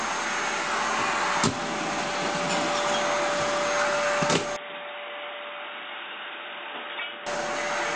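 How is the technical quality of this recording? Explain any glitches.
One real glitch. From 4.56 to 7.26 s the sound turns dull and boxy with nothing above 3.8 kHz, drops roughly 10 dB, and gains a faint new background noise. That's likely an input switched to a poorer device, changing over without any gap.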